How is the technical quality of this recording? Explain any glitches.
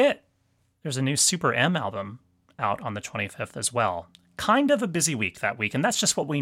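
No technical faults can be heard anywhere in the recording, and the speech signal stays continuous and intact throughout.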